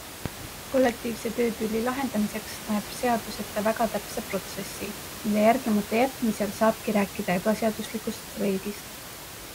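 Speech with a steady bed of room noise about 13 dB below the talker, which belongs to the recording space rather than the system, and no technical fault can be heard anywhere in the signal.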